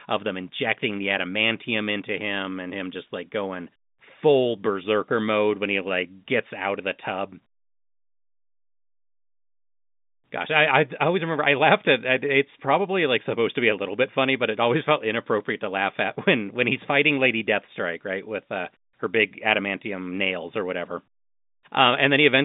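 Speech recording, no technical faults detected.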